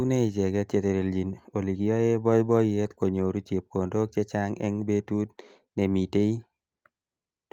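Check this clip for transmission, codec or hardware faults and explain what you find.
Nothing here points to a transmission, codec or hardware problem; the speech comes through steady and intact the whole way.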